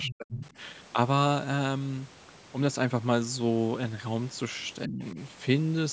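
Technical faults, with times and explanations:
0.02–0.14 s and 0.46–0.50 s: other side's voice leaking through. A second voice sits under the speech, first only about 10 dB below it, then as a faint scrap about 30 dB down. This is likely loudspeaker echo that the echo canceller left in the microphone signal.
0.05–0.44 s and 4.86–5.18 s: speech suppressed in double talk. The talker's voice sinks sharply, by as much as about 40 dB in the opening stretch and about 25 dB later. This is likely the echo canceller turning everything down while both sides spoke at once.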